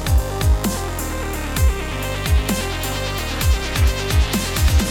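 No technical faults can be heard at any point, so there is nothing to describe in time order.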